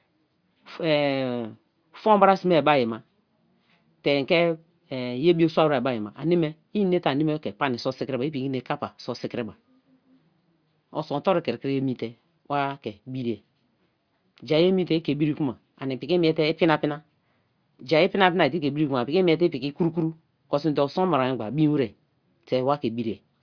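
No technical faults can be heard anywhere in this speech recording. There is no event to place on the timeline.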